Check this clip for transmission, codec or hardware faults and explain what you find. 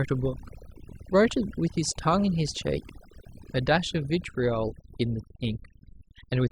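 Overdone noise removal runs throughout the speech. A noise reducer set far too aggressively has pulled frequency bands down or out wherever they sat close to its noise estimate, taking quiet parts of the voice along, so the background drops and breaks up into twinkling specks.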